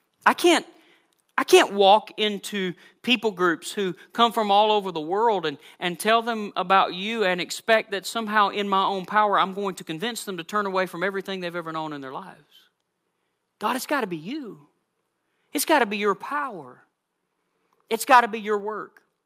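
Right at the start, from 0.26 to 0.29 s, the loudest peak gets its top shaved off, pushing about 4 dB past full scale and leaving a short, harsh crackle. That's likely microphone overload, with the input set hot enough that a few percent of samples slam into the converter's ceiling.

Then at 2.04 s everything, speech and background alike, drops by about 3 dB in a single step. That sounds like the microphone volume being stepped down by the call software, likely reacting to that earlier distorted peak by lowering the input level.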